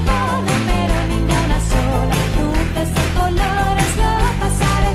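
At 1.7 s the call bitrate drops: the bandwidth estimate collapses and the encoder is forced from about 96 kbps down to about 19 kbps, staying at that floor for roughly 1.8 s and not recovering before the audio ends. With so few bits, everything is quantised coarsely and the upper band is cut off, so from 1.7 s onward the sound turns muffled and dull, with a rough, watery texture replacing the earlier clarity.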